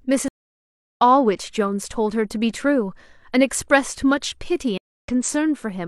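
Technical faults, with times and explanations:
0.28–1.02 s and 4.78–5.08 s, stream reconnect: the connection dropped and the player rejoined with a fresh decoder mid-stream, so the speech cuts to silence (about 0.69 s, then 0.26 s) and resumes further on, skipping roughly 0.7 s and then a tenth of a second.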